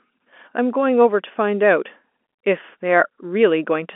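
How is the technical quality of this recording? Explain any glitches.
No glitches to report: the speech arrives over an ordinary G.711 mu-law telephone path at 64 kbps, band-limited to about 250 Hz to 3.5 kHz, and nothing in it registers as a defect.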